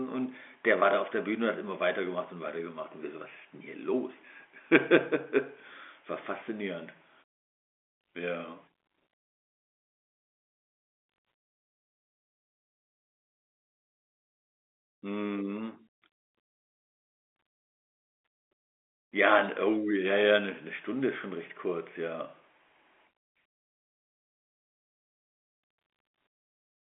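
Nothing is technically wrong with this speech clip.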